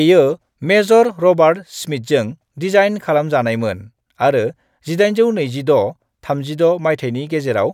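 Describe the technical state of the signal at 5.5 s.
At 5.5 s the speech signal is intact, with no audible fault at that moment.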